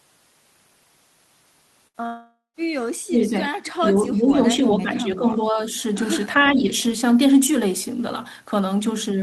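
At 1.87 s a burst of packet loss cuts about 60 ms of speech from the stream. The receiver covers the gap by stretching the last bit of sound it had for roughly 66 ms, turning it down as it goes. What you hear is a short held buzz or hiss that fades. At 1.97 s the speech picks up a little further on, with the missing piece skipped.

Close behind, from 2.06 to 2.57 s, comes what is likely a long network dropout, with about half a second of audio never arriving. Concealment again carries the last sound forward as a fading buzz or hiss. It gives way to about a tenth of a second of near silence before the speech resumes at 2.57 s. Roughly 480 ms of speech is simply gone.

From 3.06 s the talker's level sinks in three places where speech is suppressed in double talk. The likely cause is an echo canceller that cannot separate this talker from the far side's echo while both speak, so it ducks everything. 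Between 3.06 and 3.39 s the voice drops by about 25 dB. From 3.64 to 5.60 s it dips by about 10 dB, patchily, for around a second and a half of that stretch. A similar dip of about 10 dB returns briefly between 6.43 and 6.71 s.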